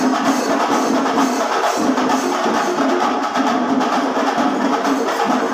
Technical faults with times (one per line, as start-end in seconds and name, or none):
none